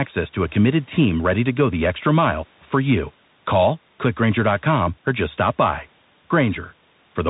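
The whole clip carries a Bluetooth CVSD headset codec fault. Nothing above 3.8 kHz survives. Sibilants turn scratchy, and a granular hiss sits under the speech.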